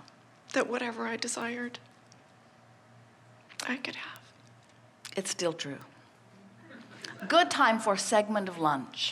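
Bit error spikes occur at 1.42, 4.16, 5.81 and 7.20 s. Each is a single corrupted sample. One flipped bit makes its value jump and return at once. Each is heard as a sharp, broadband tick, unrelated to the sound. Three peak near about -28 dBFS. The one at 4.16 s is louder, about -21 dBFS.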